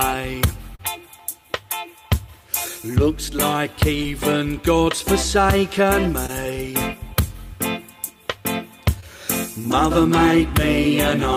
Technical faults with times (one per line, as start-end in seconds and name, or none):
0.75-0.81 short concealed packet loss
4.03-4.06 short concealed packet loss
6.26-6.30 short concealed packet loss
9.00-9.04 short concealed packet loss